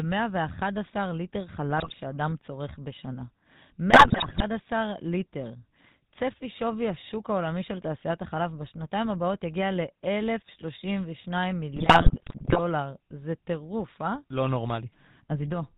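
Speech runs through the GSM full-rate codec for its entire length. Nothing above 4 kHz survives. The voice has the buzzy, gravelly roughness of a coder that rebuilds the vocal tract from a sparse pulse excitation, which fits a 13 kbps stream. GSM bit errors break in at 1.78 to 1.97 s, 3.90 to 4.44 s and 11.76 to 12.59 s. Corrupted filter, pitch and gain values reached the decoder, so the spectrum bends and the level jumps. The speech turns into squawks, pops and gargling in those spans.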